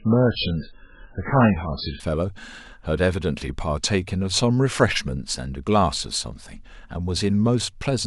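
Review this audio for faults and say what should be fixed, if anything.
From 0.0 to 2.0 s the speech has the sound of an adaptive stream starting at a low bitrate. The player began on a very lean encoding, consistent with MP3 at around 8 kbit/s, then switched to a far richer one, which fits roughly 128 kbit/s, once it had gauged the connection. Before the switch nothing reaches above 5.2 kHz, so the speech is dull and smeared with codec artefacts. At 2.0 s the quality jumps abruptly with no gap. On a spectrogram the top of the band is cut off flat at 5.2 kHz and then fills in suddenly at 2.0 s, while the waveform shows no break at the join. To prevent it, start playback on a mid-bitrate rendition or buffer until bandwidth is measured before the first segment plays.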